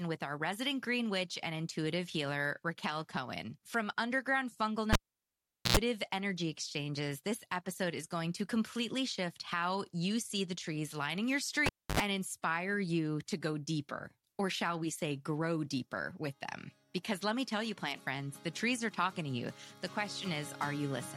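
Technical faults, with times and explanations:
4.93–5.77 s and 11.66–12.00 s, cable pulled and plugged in: a live lead is yanked and reinserted. The waveform shows a pop spike, then a flat dropout (0.79 s, then 0.29 s), then a brief buzz as only the tip makes contact (about 90 ms of 60 Hz, then 77 ms of 50 Hz) before a second pop. On a spectrogram the buzz appears as stacked mains harmonics.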